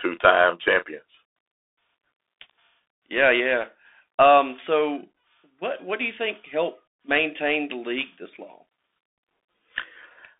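The speech runs through a Bluetooth CVSD headset codec throughout, its one-bit slope coding audibly straining: sound is confined to roughly 300 Hz–3.6 kHz, with scratchy sibilants and granular hiss.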